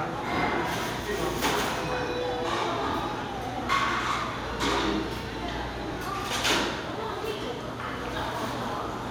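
At 2.92 to 2.94 s and again at 5.94 to 5.96 s there are overlapping chunks. The audio was handled in blocks of 3.0 s, and each new block began about 23 ms before the previous one finished, so that slice of sound plays twice at the join. The doubled segment comes through as a brief click or stutter, and the two events recur at the same 3 s spacing as the block boundaries.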